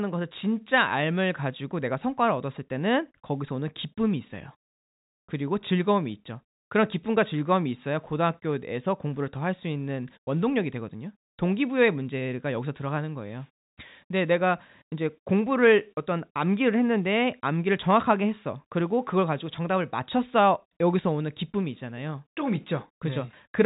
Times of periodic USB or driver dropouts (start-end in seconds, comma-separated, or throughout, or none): none